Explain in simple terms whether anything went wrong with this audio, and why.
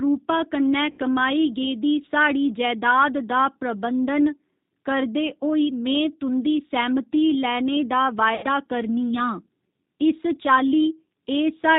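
Yes, two things went wrong. The whole recording passed through the G.729 codec, a phone-call compressor built for speech. It rebuilds the voice from a rough model of the throat and a few pulses instead of the real sound. Everything above 4 kHz is gone, so the speech sounds muffled, a little rough and slightly robotic. The damage is plainly audible, though the words stay understandable.

There are also two moments of VoIP packet loss concealed by the speech codec. Chunks of the call went missing in transit. The decoder filled each gap by repeating its last sound and letting it fade. The first gap runs from about 0.91 to 1.00 s, just before "कमाई गेदी". The second runs from about 8.35 to 8.46 s, just after "लैने दा". Each lasts under a tenth of a second and comes out as a brief buzzy or smeared sound. The voice may stay weak for a moment afterwards.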